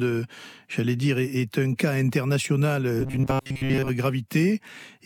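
From 3.00 to 3.89 s there's robotic sound from repeated short buffers: a rigid 134 Hz buzz, likely from roughly 7.5 ms chunks looping while most incoming audio gets skipped.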